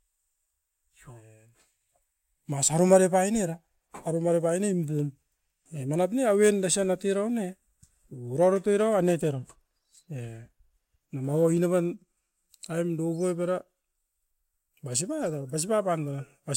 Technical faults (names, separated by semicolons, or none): none